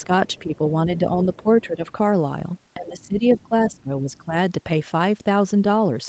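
From 0.86 to 1.11 s the speech dips by about 5 dB, and from 1.43 to 1.86 s it drops further, by about 10 dB. This is speech suppressed in double talk. The likely cause is the echo canceller detecting both ends talking at once, failing to separate near speech from loudspeaker echo, and attenuating the whole signal. The longest episode runs from 2.77 to 4.35 s, where roughly a second of speech is pulled down by as much as about 15 dB and sounds ducked.

Just after the second dip, at 1.88 to 1.92 s, a brief scrap of the other side's voice leaking through appears at about 35 dB below the speech. The likely cause is loudspeaker playback reaching the microphone and surviving echo cancellation. It returns more strongly from 3.01 to 3.81 s, at about 30 dB down, as a sustained residue inside the suppressed stretch. A faint fragment follows at 4.13 to 4.18 s, at about 40 dB down. Throughout, the audio is band-limited to 8 kHz, which fits a wideband call codec.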